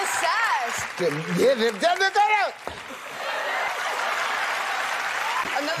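Timecode bleed enters at 2.88 s and continues to the end. Linear timecode from an adjacent track or cable has coupled into the audio path. Its square-wave signal flips between tones around 1 and 2 kHz as it encodes bits, producing a steady chirping warble roughly 15 dB below the wanted sound. The rhythm of that warble fits code running at 29.97 frames per second.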